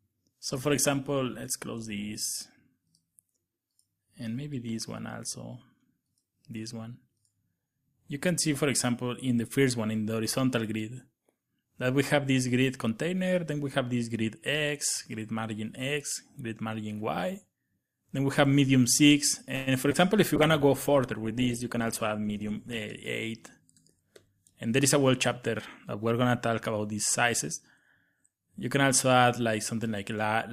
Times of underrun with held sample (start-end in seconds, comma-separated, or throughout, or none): none